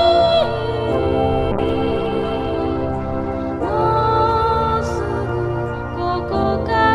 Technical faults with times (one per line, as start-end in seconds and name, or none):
1.52-6.95 call bitrate drop